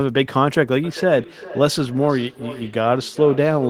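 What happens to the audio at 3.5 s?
At 3.5 s the sound is caught in a feedback echo between two devices, running from 0.84 s to the end of the clip. A second device replays the audio into a nearby microphone. Repeats come back roughly every 0.4 s, thinner and ringing, about 15 dB below the speech.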